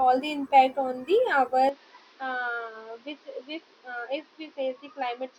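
Speech that, at 1.69 s and with no gap, turns duller and quieter through to the end, as if the input switched to a poorer device, likely a different microphone or a headset's call profile. From that point a spectrogram shows the energy cut off flat at 6.3 kHz, with a new noise floor roughly 30 dB below the speech. On the waveform the level steps down by about 10 dB at the switch.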